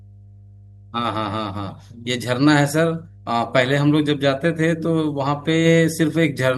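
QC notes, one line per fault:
Throughout: mains hum. A steady low tone at 50 Hz sits under the speech for the whole clip, with some low harmonics above it. It stays at about 25 dB below the speech. The tone does not change with the signal. This points to power-line coupling, such as a ground loop or a transformer close to the cabling or input stage.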